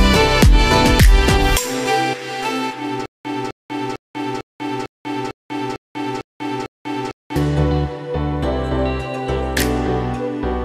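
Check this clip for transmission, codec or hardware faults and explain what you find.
There's one transmission-type fault here: a stutter with silent gaps running from 3.06 s to 7.36 s. The same 259 ms burst of sound comes back nine times, each followed by about 192 ms of dead digital silence, so it pulses on a steady 450 ms cycle. That's most likely a playback or stream stall, with each retry replaying the last buffered fragment before running dry. Whatever audio belonged in that stretch is simply gone.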